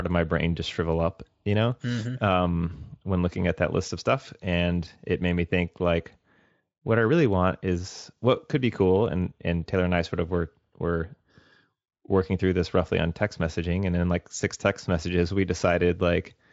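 No technical faults occur anywhere in this speech clip.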